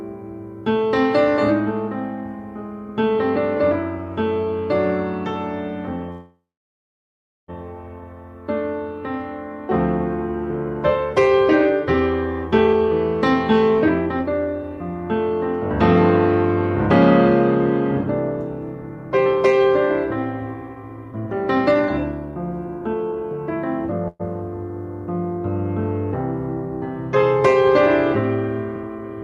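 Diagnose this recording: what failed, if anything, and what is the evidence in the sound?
Call audio freeze at 6.11–7.50 s and 24.08–24.21 s: the last sound is stretched into a fading fill, about 1.06 s silent in the first, likely from delayed network packets draining the jitter buffer. Nothing is lost, and playback resumes late.

Jitter buffer speed-up at 12.67–15.31 s, 18.75–19.67 s, 20.54–23.57 s and 27.15–27.69 s: the audio runs 6 to 16 percent fast at unchanged pitch, as the receiver trims pitch-period slices to shed excess buffered delay, roughly half a second in the third stretch.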